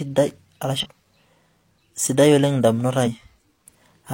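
Speech with damaged data in a compressed stream: brief glitches at 0.79–0.86 s and 3.02–3.08 s, where the decoder misreads corrupted frames and loses sync.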